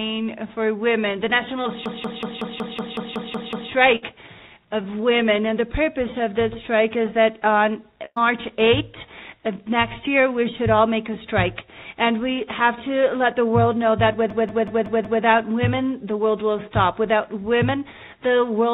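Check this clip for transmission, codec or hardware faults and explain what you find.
Two kinds of fault appear: two system hang loops and two bursts of packet loss. The audio arrives over a narrowband call path, with nothing above 4 kHz, which points to G.711 A-law at 64 kbps.

System hang loop, 1.86 to 3.72 s and 14.30 to 15.23 s: the system froze while the sound hardware kept replaying its ring buffer, which fits an 8192-sample buffer. One 186 ms slice repeats at 5.4 Hz, ten times and then five times, as a machine-gun stutter. Essentially no audio is lost.

Burst of packet loss, 3.96 to 4.04 s and 8.05 to 8.19 s: packets went missing and the receiver stretched the last sound while fading it. About 60 ms is skipped in the first burst, and 100 ms in the second, whose fill ends in 50 ms of silence before the audio resumes further on.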